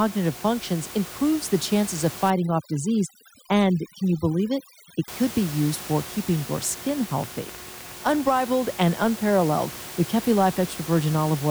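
From 2.30 to 5.08 s, overdone noise removal strips the room noise, which elsewhere sits about 15 dB below the speech, into near silence sprinkled with twinkling specks. Quieter parts of the speech are cut along with it. A spectrogram shows dark gaps with scattered isolated dots.

From 6.61 to 8.41 s, a train of clicks ticks over the sound, including the pauses: around twenty similar pulses at roughly 10 per second, unevenly spaced and about as loud as the speech. The likely cause is interference from nearby equipment or a faulty connection. On the waveform they appear as sharp, repeated spikes.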